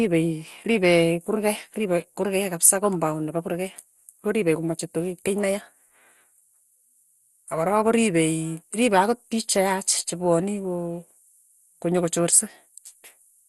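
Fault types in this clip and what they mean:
MP2 compression: The speech sounds dull and gurgly from start to finish, with a granular, watery texture and nothing at all above about 12.2 kHz. That's likely MPEG Layer II coding starved of bits, which fits a rate around 64 kbps. The encoder splits the signal into 32 sub-bands and, short on bits, shuts the top ones off and quantises the rest coarsely, so bands flicker and the damage is plainly audible.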